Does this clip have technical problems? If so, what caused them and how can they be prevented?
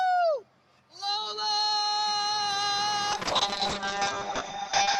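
Yes. Noise suppressor applied to music or sounds, throughout: a speech-oriented suppressor treats steady tones and decaying tails as noise, so the level swings by about 5 dB, with attacks surviving while sustained parts sink and pump. Disable speech noise suppression when the source is not speech.

Sound cut by the noise suppressor, 0.43 to 0.94 s: here the suppressor misjudged the sound as noise and pulled it down harder than the rest, by about 12 dB at its deepest, for about half a second, thinning the sustained portion. Use a music or original-sound mode that bypasses suppression.

Call bitrate drop, 3.12 s to the end: the bandwidth estimate collapsed and the encoder starved, which fits a fall from around 40 kbps to about 6 kbps. The audio turns coarse and watery, and the top end narrows from 20 kHz to 8 kHz, bottoming out for about 1.6 s. Ensure a stable network and set a higher minimum bitrate.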